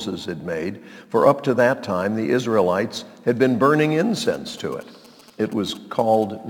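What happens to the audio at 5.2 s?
A galloping dit-dit-dit of brief 217 Hz buzzes, about 25 dB below the sound, runs from 4.25 to 6.24 s: GSM signalling bursts from a nearby 2G phone, rectified by the audio circuitry.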